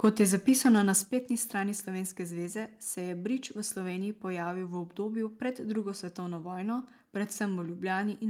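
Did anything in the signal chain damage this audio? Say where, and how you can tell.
Yes. From 0.04 to 0.97 s the loudest speech peaks are flattened against the converter's limit, giving a harsh, crackly edge. That's microphone overload at the converter stage, likely from input gain set too hot: peaks run about 4 dB past the limit, clipping a few percent of samples.

Then at 1.05 s, right before "strani slovenske zveze", voice and background both drop together by about 6 dB in one step. That's microphone volume stepped down in call processing, likely the software reacting to the clipping by cutting the device's input level.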